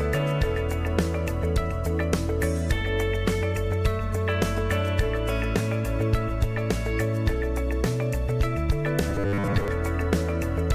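From 9.10 s to 9.68 s the audio turns into a rigid, metallic buzz fixed at 100 Hz: robotic sound from repeated short buffers. Most of that stretch is repeated material. The likely cause is late audio, filled by looping a 10 ms buffer.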